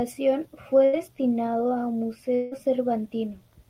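At 0.85 s the speech briefly freezes into a held sound that weakens for about 74 ms until 0.95 s, then picks up with about 80 ms of speech gone. This is a burst of packet loss: consecutive packets never arrived, so the receiver stretched the last sound to cover the hole.

From 2.35 s to 2.53 s a longer smeared, fading tone of about 167 ms stands in for the speech, never quite reaching silence, and the voice resumes with roughly 160 ms skipped. This is likely a long network dropout, with concealment continuing the final sound until audio returned.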